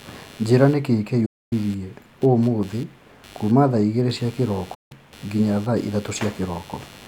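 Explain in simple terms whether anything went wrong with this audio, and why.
A faint buzz pulsing about a hundred times a second runs under the speech throughout. This is computer activity noise: the computer's changing workload disturbs the audio circuit's shared ground.

The speech suddenly goes silent from 1.26 to 1.53 s and again from 4.74 to 4.92 s. These are digital broadcast dropouts: the receiver lost the signal, muted, and that part is gone.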